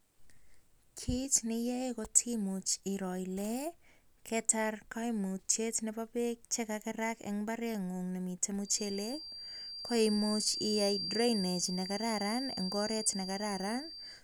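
From 8.6 s, right after "kagerak en mbareng'ung nemiten", a thin, steady whistle near 4.7 kHz sits about 10 dB below the speech until the end, swelling and fading slowly in level. This feedback whistle is likely a loudspeaker-to-microphone loop hovering at the edge of feedback, sustaining one frequency without running away.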